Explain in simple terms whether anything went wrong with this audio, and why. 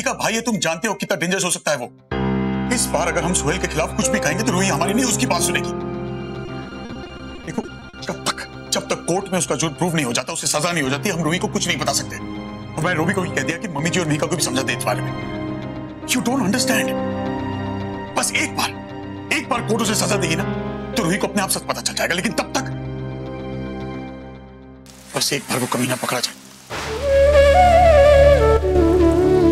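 Between 6.45 and 8.07 s the audio turns choppy. This is repeated packet loss: pieces of the stream kept going missing, each gap no longer than 40 ms, and each was patched by stretching the last bit of sound. About a quarter of that stretch is patched-over filler. Unlike a single dropout, the holes come one after another, which gives the choppy stutter.

At 10.20 to 10.45 s, 13.51 to 13.79 s and 28.57 to 28.75 s, the sound briefly drops in level and then returns. The likely cause is one channel dropping out: one side of the stereo signal vanished, so the combined sound lost part of its strength. Unlike packet loss, nothing stutters or repeats; it simply dips and recovers.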